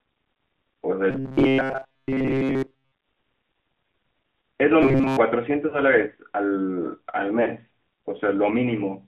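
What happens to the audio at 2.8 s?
At 2.8 s the sound is caught in a robotic buzz from repeated short buffers, running from 1.11 to 2.94 s. It likely comes from a roughly 7.5 ms chunk being replayed while most of the real audio is skipped. That forces a rigid, metallic 133 Hz buzz, which shows as evenly spaced horizontal harmonics on a spectrogram and as identical repeating cycles in the waveform. Underneath, the AMR narrowband mobile codec at 10.2 kbps confines everything to about 200 Hz to 3.4 kHz, leaving the spectrogram blank above that line, with plainly audible buzzy, synthetic coding damage.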